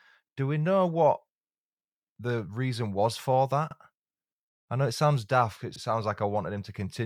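Overlapping chunks are heard in this speech clip at 3.71 to 3.76 s and again at 5.76 to 5.81 s, where a 50 ms stretch plays twice as a brief stutter. The audio was handled in 2 s chunks, each beginning 50 ms before the previous one finished, so every join repeats that overlap.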